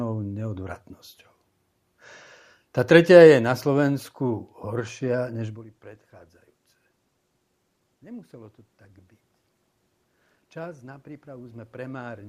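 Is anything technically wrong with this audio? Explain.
Yes. From 10.53 s to the end there is automatic gain rising: the gain control judged the input too quiet and increased its gain gradually, so voice and room noise swell together over more than a second. The level change near the midpoint is the talker moving, not a fault.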